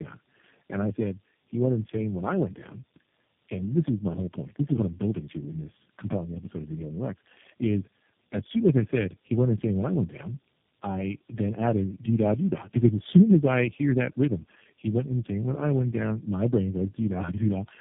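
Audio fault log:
Throughout: tandem speech coding. The speech sounds rougher, duller and more warbly than one low-rate coder would leave it, which fits about three speech codecs in a row, the last resembling G.729A. Each re-encodes the previous one's errors, so the damage compounds. Nothing is heard above 3.6 kHz, but unlike a simple band limit, the remaining band is also smeared and gargly, with the artefacts stacked rather than from one source.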